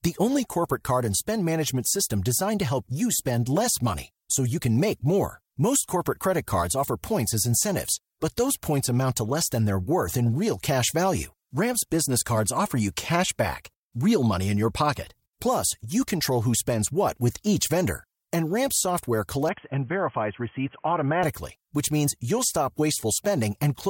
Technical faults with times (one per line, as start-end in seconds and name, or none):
19.49-21.23 input switched to a poorer device